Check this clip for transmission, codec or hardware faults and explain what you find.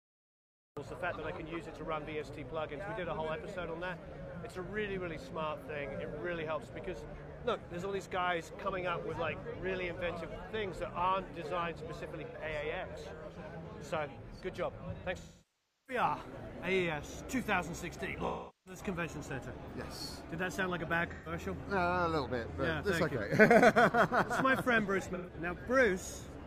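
Two kinds of fault are present: a cut-off start and repeated AAC frame loss with concealment.

The cut-off start runs from 0.00 to 0.77 s. The clip opens in digital silence. At 0.77 s the sound appears abruptly, already in progress. There is no attack and no fade-in. The capture or stream began late, so the first part of the event was never recorded. The jump from silence to full signal gives a hard, sudden entry.

AAC frame loss with concealment occurs five times. The gaps start at 12.26, 15.19, 18.27, 21.13 and 25.14 s. They last about 85, 683, 384, 128 and 128 ms. In each case the decoder lacked data and rebuilt the audio from the last good spectrum. The short gaps sound smeared and noisy. The losses at 15.19 and 18.27 s decay toward silence, then fade back in.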